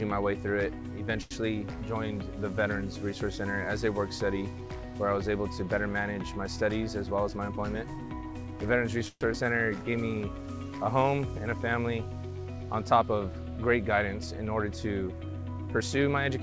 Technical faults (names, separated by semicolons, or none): short stall from a late packet; jitter buffer speed-up; call audio freeze; short concealed packet loss; jitter buffer slow-down